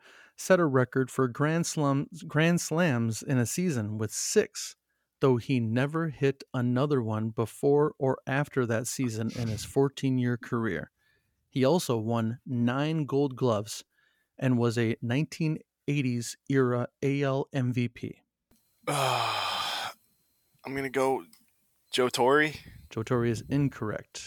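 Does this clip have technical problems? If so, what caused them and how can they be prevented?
No, nothing in this speech recording stood out as a technical problem on listening, so there is nothing here that calls for a cause or a fix.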